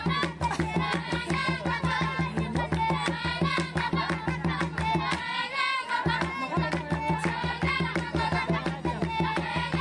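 No technical faults can be heard anywhere in this audio.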